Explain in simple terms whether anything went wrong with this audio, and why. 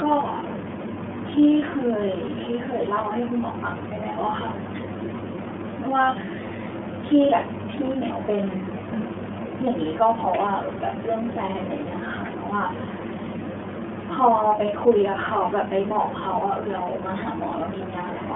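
Throughout the speech, the iLBC codec, a phone-call coder, has squeezed the sound. Nothing above about 3.7 kHz survives, giving a telephone tone. Unlike plain muffling, each slice (fitting 30 ms frames) is rebuilt separately, adding a plainly audible rough, synthetic edge.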